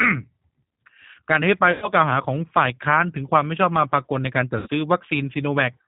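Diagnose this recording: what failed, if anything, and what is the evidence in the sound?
The codec stage is the root failure: the speech passed through a G.729 codec, specifically the low-complexity 8 kbit/s G.729A variant. Throughout the recording the damage is plainly audible. Nothing reaches above 4 kHz, so sibilants lose their edge, and the voice has a slightly synthetic, grainy quality. That comes from the decoder rebuilding speech from a vocal tract filter, a pitch predictor and a handful of pulses per 10 ms frame.

On the network side, VoIP packet loss concealed by the speech codec appears twice. From 1.72 to 1.89 s, about 100 ms of audio went missing, which fits five lost 20 ms packets. From 4.58 to 4.68 s, about 80 ms was lost, which fits four. In both gaps the decoder kept repeating its last pitch and filter at falling gain. You hear the sound smeared into a fading buzz or coloured noise, and it stays weak briefly after real packets resume.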